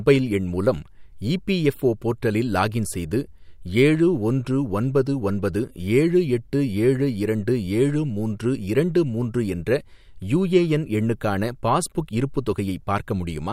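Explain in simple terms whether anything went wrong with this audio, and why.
Nothing went wrong here: the recording holds steady throughout, with no dropouts, breaks or sudden changes in the sound to point to.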